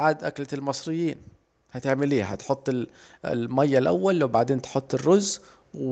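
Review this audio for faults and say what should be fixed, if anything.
Automatic gain rising from 0.49 s to the end: the gain control judged the input too quiet and lifted it steadily, swelling speech and background together. Fix it by raising the microphone's input level at the source, or by capping the AGC's maximum gain and slowing its adaptation.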